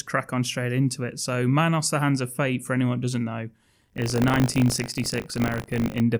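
From 3.8 to 6.01 s, buffer tearing: the writer and the playback hardware slip out of step, splicing a small slice of audio roughly 40 ms stale into each period, producing a 50 Hz robotic rattle on the speech.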